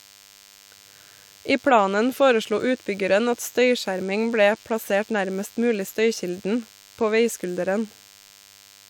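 Throughout the speech runs DECT cordless phone buzz: a nearby handset's radio bursts, rectified by the audio circuit, produce a thin 100 Hz buzz roughly 30 dB below the voice. A spectrogram shows evenly spaced harmonic lines at 100 Hz multiples spanning the whole clip.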